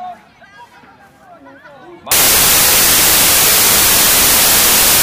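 From 2.12 s, wrong sample width, consistent with 24-bit data read as 16-bit: mismatched bytes bury the sound in noise at two-thirds speed and pitch.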